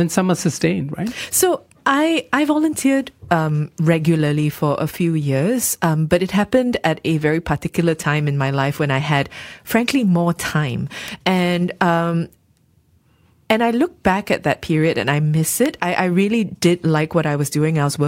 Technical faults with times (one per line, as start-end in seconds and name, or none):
11.08 electrical switching spike
15.66 electrical switching spike